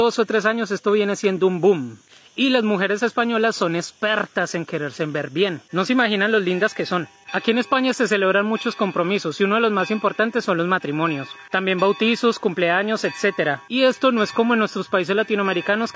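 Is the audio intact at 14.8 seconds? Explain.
Yes, the audio is intact at 14.8 seconds, with nothing there beyond the ordinary call microphone processing.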